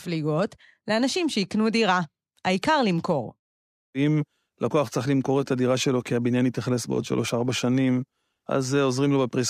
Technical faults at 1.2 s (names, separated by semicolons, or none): none